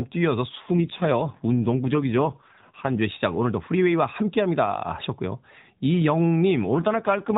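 From 0.50 to 3.00 s, and again from 6.64 s to the end, an AMR rate drop makes the speech rougher and more synthetic, which fits the codec stepping down from 12.2 to 5.9 kbps. The spectrogram keeps its 4 kHz ceiling and the waveform shows no gap, but the harmonics look smeared and grainy.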